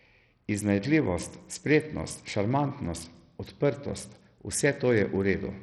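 Speech running through a starved Bluetooth SBC compression link, likely at a very small bit pool that fits roughly 64 kbps, is heavily damaged for its whole length. The upper sub-bands get almost no bits, so treble flickers and drops out, and gritty noise and aliasing sit on the sound.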